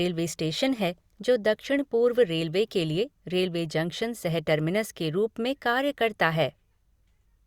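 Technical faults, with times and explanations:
Nothing stood out on listening to the speech in this clip.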